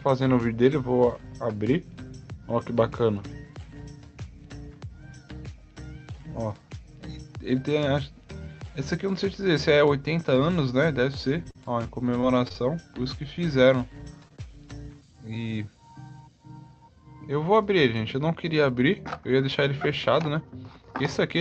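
From 11.43 to 11.67 s and again from 12.07 to 12.91 s, audio packets repeatedly arrived too late or not at all. This is repeated packet loss, producing a robotic sound. The decoder had to bridge each gap by extending the last stretch of audio. In the first burst those patches fill about a third of the span. In the second the gaps are more numerous but shorter. Either way, the sound turns choppy, with fragments dropped out.

At 14.28 to 14.32 s and 14.36 to 14.40 s, two isolated drops of about 20 ms each occur. These are short concealed packet losses. In each, the receiver synthesised a filler from the preceding audio and then crossfaded back into the real signal. The result is two quick smears or wobbles in close succession, and any very short sound in those spots can go missing.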